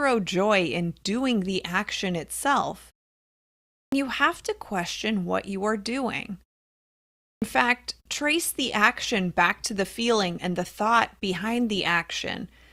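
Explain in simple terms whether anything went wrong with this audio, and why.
Two things went wrong. The first is a clipped start after a pause, and it happens twice. At 3.79 s, just before "you have to question", and at 7.29 s, before "fact trace", about 0.13 s of speech is missing. Each comes after nearly a second of quiet. The playback device had dozed off and woke too late, so the words begin abruptly.

The second is an adaptive stream at a lower bitrate. From 8.6 s to the end, after "fact trace", the stream switched to a cheaper version, probably because the connection slowed. The speech suddenly picks up more digital artefacts, with no gap.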